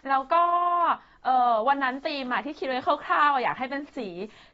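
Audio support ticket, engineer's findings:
Dull, smeared speech throughout, with a warbling, fizzy texture on sibilants and sustained sounds. Nothing above 7.6 kHz. Likely AAC compression (AAC-LC) at a low bitrate, around 24 kbps. The encoder lowers its cut-off and quantises frequency lines coarsely, leaving holes in the spectrum.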